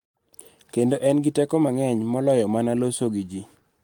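Nothing technical stands out in this short bit of speech; there's no fault to point to anywhere in it.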